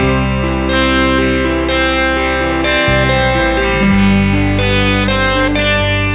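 No technical faults are audible.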